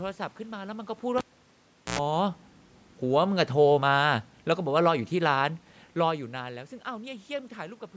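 A cable pulled and plugged in interrupts this speech recording from 1.18 to 1.99 s. A pop marks the live lead coming out, then the signal drops to near silence for about 0.76 s. As the plug goes back, a 93 ms burst of 60 Hz mains buzz appears while only the tip makes contact, and a second pop arrives as the sound returns. Automatic gain falling follows from 3.03 to 6.28 s. The gain control judged the input too loud or its background noise too strong and eased its level down by about 5 dB. The speech and the room's background noise sink together, which separates this from the talker shifting position near 6.0 s.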